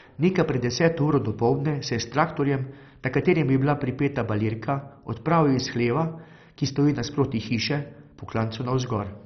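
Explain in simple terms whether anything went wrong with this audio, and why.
The speech sounds dull and muffled from start to finish, with a gurgling, grainy roughness. This points to heavy MP2 compression, likely squeezed too hard, so the upper sound bands switched off above about 6.1 kHz and the remaining bands turned coarse.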